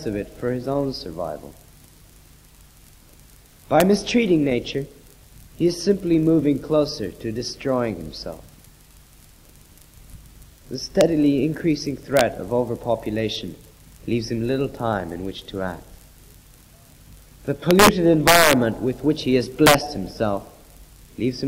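Integer overflow cracks at 3.80, 11.01, 12.17–12.21, 17.71–17.88, 18.28–18.53 and 19.66–19.74 s: peaks up to about 5 dB over full scale wrap to the opposite sign. The waveform shows full-range flips, and the spectrogram shows broadband vertical streaks.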